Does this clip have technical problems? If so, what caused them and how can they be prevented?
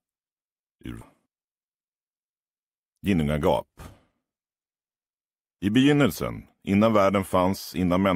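Yes. From 1.27 to 3.22 s there is a jitter buffer speed-up. The receiver's buffer had filled beyond its target depth, the kind of backlog left when delayed packets arrive in a burst. To drain it, the receiver repeatedly cut out short slices a pitch period or so long. The audio in that stretch plays about 10% fast without any change in pitch, so it sounds hurried, and about a fifth of a second is lost overall. A steadier network path, or a buffer that adapts its target more gradually, would prevent it.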